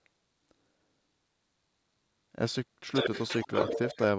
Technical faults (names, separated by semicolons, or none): echo leak